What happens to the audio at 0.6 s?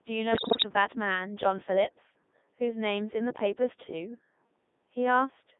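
At 0.6 s the audio is near the end of a burst of bit errors on digital voice radio, running from 0.32 to 0.65 s. Corrupted bits, around one in ten, scramble the pitch, level, voicing and spectrum values of each frame, so the synthetic sound jumps and breaks into warbles and bleeps. A packet dropout would leave a gap; this keeps sounding but turns to gibberish.

Underneath, the whole clip carries the Codec 2 vocoder, heavily damaged and limited to about 200 Hz to 3.6 kHz, which fits its 3.2 kbit/s mode. The decoder rebuilds speech from sine waves using only pitch, voicing, energy and envelope, giving a robotic, buzzy tone rather than the swirly smearing of waveform codecs.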